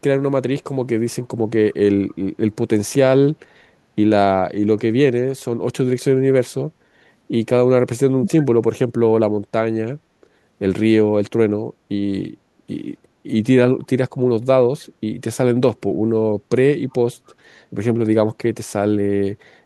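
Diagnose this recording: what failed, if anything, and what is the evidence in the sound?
A faint delayed copy of the speech surfaces briefly at 2.09–2.14 s and 17.27–17.34 s, trailing the original by 273 ms and sitting roughly 35 to 40 dB below it. This is an echo leak in call processing, likely far-end loudspeaker pickup that the echo canceller failed to remove completely.

At 8.19–8.46 s the speech dips by roughly 15 dB in pieces, totalling around 150 ms, while the other side is also talking. This looks like speech suppressed in double talk. The call processing likely couldn't tell the near talker from loudspeaker echo, so it attenuated both.

The room background sags by about 6 dB at 11.74–11.88 s and about 7 dB at 12.37–12.67 s, then recovers. This is background gated by the echo canceller. During call processing, loudspeaker playback made it clamp the microphone path until it released.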